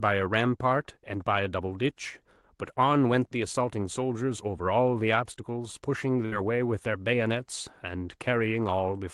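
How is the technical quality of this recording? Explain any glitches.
One glitch stands out in this speech recording, which came through a call path with a top end near 12 kHz, consistent with Opus at a modest bitrate. At 6.25 to 6.34 s there is a burst of packet loss: a brief held, fading tail as the receiver stretches the last sound over lost packets, then a jump past 60 ms of missing audio.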